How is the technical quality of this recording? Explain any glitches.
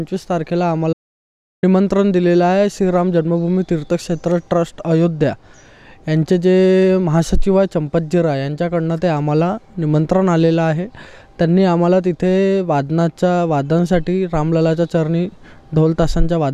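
There is one glitch: an audio dropout to silence from 0.93 to 1.63 s, losing about 0.70 s. The sound stops abruptly and returns mid-flow, likely because the input was briefly lost while zeros kept being written. On a waveform it's a flat line; a spectrogram shows a blank column with no room tone.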